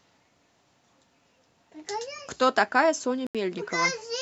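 A Bluetooth stall hits at 3.27 s. The speech cuts to silence for 80 ms, until 3.35 s, and then carries on. The likely cause is radio interference delaying packets, so the headphones' buffer ran empty and playback paused until the resent audio arrived.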